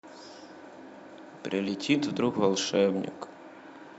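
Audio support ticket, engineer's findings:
Compressed frames skipped at 2.33 s. Speech jumps ahead abruptly. About 40 ms of audio missing, roughly two frames, consistent with a 20 ms frame codec. Probable component: decoder or file integrity. Frames absent from the stream or rejected as corrupt.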